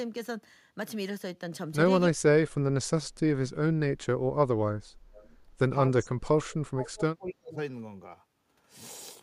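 Speech, with the voice dipping by roughly 30 to 40 dB at 2.1–2.65 s, 4.33–5.34 s and 5.9–7.58 s, likely speech suppressed in double talk. The level is pulled down over these stretches. At 5.16–5.27 s a brief repeat of the voice returns 270 ms late, about 30 dB below the speech, likely an echo leak. It is a distinct delayed copy, not a smooth reverberant tail.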